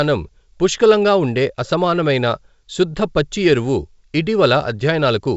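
The speech has come through G.722 wideband telephone coding at 64 kbit/s, which keeps the sound clear up to 7 kHz with at most a faint trace of the coder in the upper band, and nothing in the signal points to a fault.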